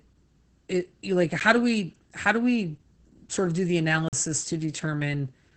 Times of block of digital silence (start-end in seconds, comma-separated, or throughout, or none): 1.40, 4.09-4.13